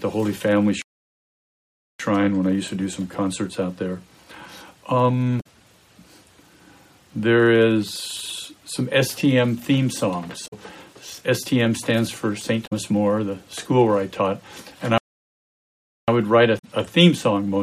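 At 0.82 s the sound cuts to silence for about 1.18 s and resumes at 2.00 s. This is a playback stall, likely from the player running short of data or its output thread being blocked. Brief glitches at 5.37, 10.44 and 12.63 s, each lasting roughly 90 to 100 ms, come from damaged data in the compressed stream: the decoder misreads corrupted frames and loses sync until it finds the next valid header. A second stall silences the output from 14.98 to 16.08 s, about 1.10 s. A final glitch from the same stream damage follows at 16.55 s.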